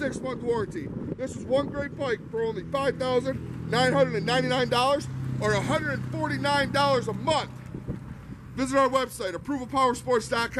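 No technical faults can be heard anywhere in the audio.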